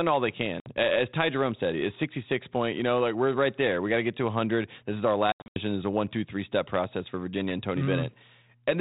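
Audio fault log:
0.60–0.74 s and 5.32–5.58 s, packet loss on an ADPCM call: after "all they" there is one hard-edged gap of 60 ms, about three packets. After "is our", 200 ms goes missing as scattered holes across 240 ms, the longest 80 ms, roughly ten packets. Silence fills each hole, and the decoder's adaptive predictor and step size lose track of the sender's. The sound therefore resumes slightly distorted before resettling within tens of milliseconds.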